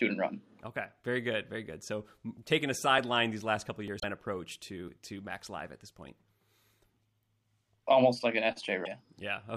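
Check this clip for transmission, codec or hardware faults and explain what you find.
Three faults are audible: one skip at 3.88 s and two short codec disturbances, at 3.99 to 4.04 s and 8.84 to 8.87 s.

At 3.88 s there is a small forward jump in the speech and no gap of silence. About 10 ms of audio is missing, and the two sides are butted together. This is likely a dropped buffer (overrun): the capture software failed to read a block of samples before the hardware reused that memory, so the block was overwritten and never recorded.

Just after, from 3.99 to 4.04 s, and again from 8.84 to 8.87 s, the speech jumps ahead and a brief disturbance follows. The disturbed stretches run roughly one to two frames, which fits 26.1 ms MP3 frames. The likely cause is a broken MP3 bit reservoir. When frames are lost, the next frame still points back to borrowed space in earlier frames. It then decodes bytes that belong to a different frame, and that garbles the audio until the reservoir refills.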